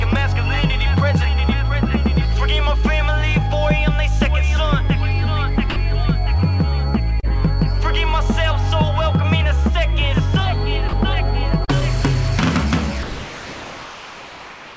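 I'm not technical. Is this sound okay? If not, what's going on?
No, there are two kinds of glitch here.

Sound dropped by the voice detector: at 5.70 s and 10.89 s, short bits of sound vanish into a soft hiss, and from 13.03 s to the end the sound drops out to that steady hiss. Most likely the sending side judged that quiet stretch to be background and stopped sending.

Short concealed packet loss: at 7.20 s and around 11.65 to 11.81 s, a few hundredths of a second never arrived in time. The receiver papered over each gap by stretching the preceding sound, so you'd hear a quick smear or wobble.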